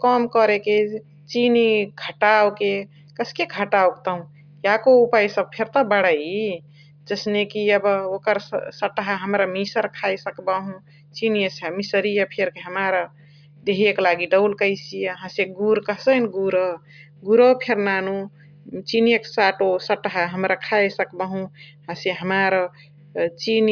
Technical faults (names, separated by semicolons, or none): none